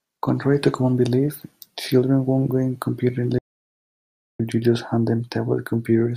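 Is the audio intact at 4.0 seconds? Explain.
No. At 4.0 seconds the speech is in an audio dropout to silence, lasting from 3.39 to 4.40 s. Input was likely lost, so silence replaces about a second of sound.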